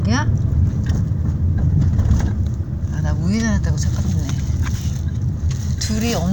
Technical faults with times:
none

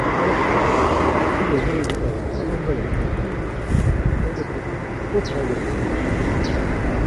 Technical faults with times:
0.00-7.06 low-delay AAC compression

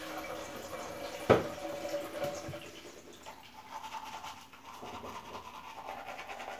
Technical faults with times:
none

